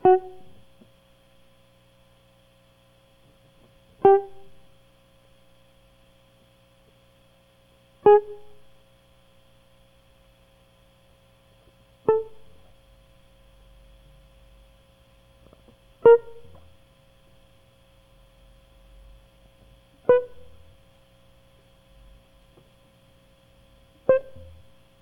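No technical faults are audible anywhere in this music.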